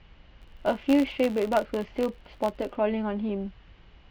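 A filter restarted on every block runs from 0.42 to 2.77 s. Its state is wiped at each block boundary, so every block opens with a small transient. The result is an 86.1 Hz buzz, which fits a 512-sample block, rising and falling with the speech level.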